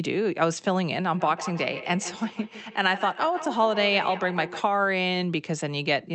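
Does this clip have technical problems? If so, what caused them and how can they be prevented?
Yes. From 1.14 to 4.66 s there is feedback echo between two devices. The speech returns roughly every 150 ms, thinning and ringing, peaking about 11 dB below the speech. A second device in the room replays the call into this microphone, beyond its echo canceller's reach. Keep only one device in the room joined to the call, or mute the others.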